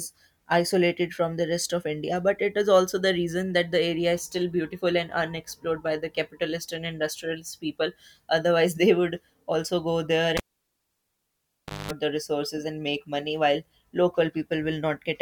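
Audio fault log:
10.37–11.91 s, cable pulled and plugged in: right after "would also go there" a pop cuts the speech to near silence for about 1.49 s as the live lead leaves the socket. On reinsertion only the plug tip makes contact at first, leaving the input unscreened and without a ground. That lets a 210 ms burst of 50 Hz mains buzz through before the full connection pops the sound back in, ahead of "the resources and make".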